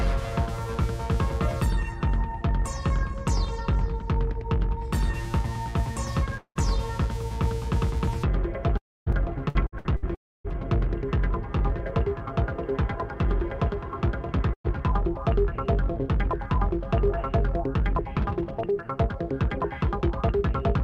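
The audio has network-loss damage in several spots. There are three long network dropouts, at 6.37 to 6.58 s, 8.77 to 9.09 s and 10.15 to 10.47 s. Each time the sound trails off into a fading buzz or hiss and then goes quiet for roughly 70, 260 and 270 ms, dropping about 180, 300 and 300 ms of material. That pattern likely comes from the stream stalling while the receiver briefly stretched the last sound. From 9.12 to 10.54 s there's repeated packet loss (robotic sound): seven quick holes, the longest 61 ms, patched over about 17% of that span, giving a choppy sound with pieces missing. Finally, a burst of packet loss at 14.53 to 14.67 s loses around 120 ms, with a short fade and about 80 ms of silence before the sound picks up again.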